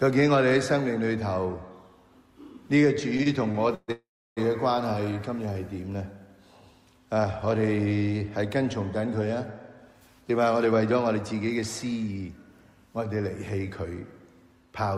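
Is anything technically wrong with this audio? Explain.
Yes, there are three network-related faults, all in the receive path.

From 3.17 to 3.90 s there are repeated stalls (stutter). Playback halts four times, and each gap is filled by stretching the last sound, the longest for about 134 ms. Together the fills take up 205 ms, roughly 28% of that span. The jitter buffer kept draining because packets arrived late, and the receiver padded each shortfall rather than dropping anything. What separates this from a single freeze is the pattern: several short hitches in a row, heard as a dragging, stuttering rhythm.

From 3.92 to 4.39 s there is a call audio freeze. The sound holds for 447 ms: a brief continuation of the last sound, then about 320 ms that falls to silence. Nothing is lost, because the audio resumes exactly where it stopped, now 447 ms later. The likely cause is a single longer hold-up of packets that emptied the buffer. 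Unlike the stutter before it, this is one sustained gap that decays to silence rather than a series of short catches.

From 9.93 to 12.45 s there is a jitter buffer speed-up. The audio plays at about 109% of normal rate while keeping its pitch, which makes it sound hurried. The receiver was trimming excess buffered delay by cutting out tiny pitch-period slices over and over, about a fifth of a second in total. A simple faster playback would raise the pitch, and that does not happen here.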